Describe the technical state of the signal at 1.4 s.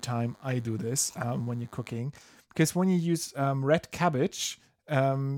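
A nearby DECT cordless phone or base station is firing radio bursts every 10 ms, and the audio circuitry rectifies them into DECT cordless phone buzz. From 0.0 to 2.0 s, including 1.4 s, this puts a faint, thin 100 Hz buzz, rich in harmonics, well beneath the speech.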